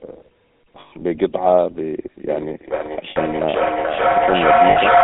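A speech clip carried over the GSM full-rate codec throughout. The band is confined to roughly 200 Hz to 3.6 kHz, and the voice has the buzzy, gravelly texture of a coder that models the vocal tract and excites it with a sparse, regularly spaced pulse train. This damage is plainly audible and consistent with 13 kbps full-rate coding. Lost GSM frames break the sound three times: from 0.80 to 0.92 s (120 ms), from 3.10 to 3.18 s (60 ms) and from 4.70 to 4.78 s (60 ms). In each gap the decoder repeats the last good frame's parameters, so the sound turns into a short, rough, metallic ring rather than a clean dropout. A feedback howl starts at 2.28 s and runs to the end of the clip. A second device in the same room is picking up the call, so the path from loudspeaker to microphone gains level on each pass, and the energy narrows to a tone around 700 Hz. The loop delay is roughly 0.4 s, and the tone peaks at about 6 dB above the speech. 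Because the loop is never broken, the howl sits on top of the later speech and on top of the second and third frame losses.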